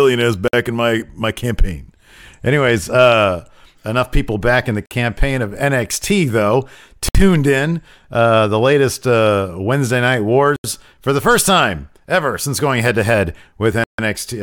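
Speech drops to silence at 0.48, 4.86, 7.09, 10.56 and 13.84 s for 50 to 150 ms, likely Bluetooth stalls from a drained buffer. Each shows as a flat waveform gap and a blank spectrogram column.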